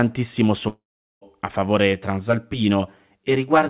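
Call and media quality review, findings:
Long network dropout, 0.68 to 1.23 s: audio stopped arriving, likely packet loss. Concealment stretches the last sound into a fading buzz, then near-silence for about 0.4 s. The lost section never returns.

Channel delay (comb filtering), 1.93 s to end: one channel is about 10 ms late and summed to mono. This cuts notches from around 50 Hz, spaced about 100 Hz apart, so the speech sounds rough or slightly doubled over the 4 kHz call bandwidth.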